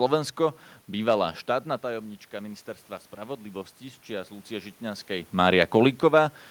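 From 3.15 s to 5.38 s there is automatic gain rising. The input dropped by about 14 dB, and the gain control responded by slowly adding about 3 dB, so the speech and the room noise swell together over roughly two seconds.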